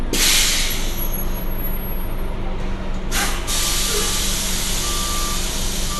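Throughout, the clip shows MP2 compression, likely at a starved bitrate around 80 kbps: upper sub-bands are dropped, leaving nothing above 12.2 kHz, while remaining bands are coarsely quantised and flicker, giving a dull sound with plainly audible gurgling, granular distortion.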